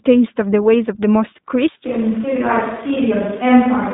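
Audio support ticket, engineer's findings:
iLBC codec, whole clip. Narrowband VoIP path coding each 20 ms frame's excitation independently; rough, slightly synthetic texture on the speech, plainly audible. Line band about 150 Hz to 3.7 kHz, nothing above 4 kHz, so speech sounds thin and boxy. Roughness consistent with the 15.2 kbps mode.

Switch to a distant microphone, 1.86 s to end. Close mic signal likely dropped, with a farther pickup such as a camera mic taking over. Abrupt change at 1.86 s: speech turns roomy and hollow, bass thins, and level falls by roughly 5 dB. Room noise rises to roughly 25 dB below the speech. No return to the close mic before the clip ends.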